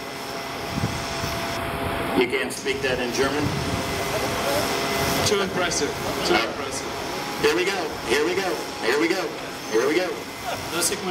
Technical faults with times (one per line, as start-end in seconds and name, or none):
1.57-2.57 channel delay (comb filtering)